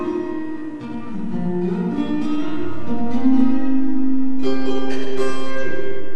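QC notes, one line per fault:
Throughout: MP2 compression likely causes the dull, gurgling, granular sound; starved upper sub-bands drop out and flicker, which fits a rate around 80 kbps.
3.39–3.58 s: DAB burbling, short noise blips in sub-bands as bit errors corrupt sub-band samples, pointing to roughly seven damaged frames at a low error rate.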